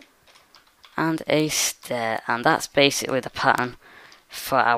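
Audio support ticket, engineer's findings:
Bit error spikes at 1.40, 2.18 and 3.58 s: lone sharp ticks, broadband, unrelated to the audio around them. Peaks around -13, -19 and -7 dBFS. Each looks like a flipped bit in one sample, maybe two at 3.58 s, so check memory or the digital link.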